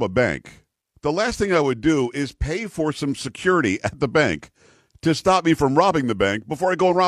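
From 1.20 to 2.52 s, and again from 6.78 s to the end, a Bluetooth SBC bit pool drop dulls the treble and adds gritty noise. The sound fits a link squeezing the bit pool from 31 to 16, near 110 kbps.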